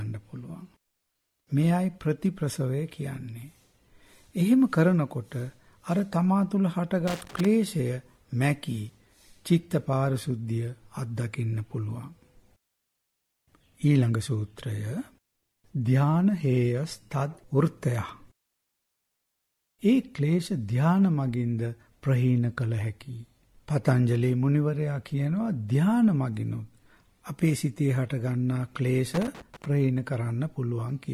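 Loose connector crackle appears from 7.08 to 7.45 s and again from 29.14 to 29.66 s. A worn contact rapidly breaks and remakes the path, chopping the audio into an irregular scratching burst. The waveform shows jagged dropouts and spikes, and the spectrogram shows ragged broadband vertical streaks.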